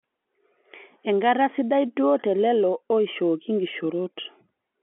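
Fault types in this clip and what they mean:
No faults can be heard.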